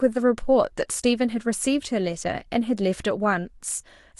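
Nothing goes wrong anywhere in this bit of speech; there's no technical fault to point to at any moment.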